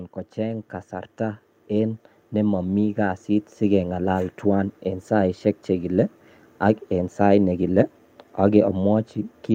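From 0.35 to 5.13 s, automatic gain rising: the gain control judged the input too quiet and raised it about 9 dB. Speech and background swell together as the waveform envelope widens steadily and the spectrogram brightens.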